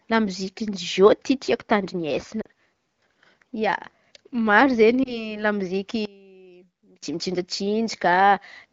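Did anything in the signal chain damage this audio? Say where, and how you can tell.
Yes. At 2.41 to 2.47 s and again at 5.03 to 5.35 s there are lost AMR speech frames, a network-side radio loss. The first gap is about 40 ms, the second about 20 ms. The decoder papers over each one by repeating the last pitch and vocal-tract settings at falling gain, so you hear a short dip or warble before the sound recovers.

From 6.05 to 7.03 s the level drops by about 24 dB and most of the sound cancels, leaving a faint residue. That's the signature of one channel inverted, likely a polarity flip in the wiring or the mixing stage. When the two channels are summed to mono, everything they share cancels.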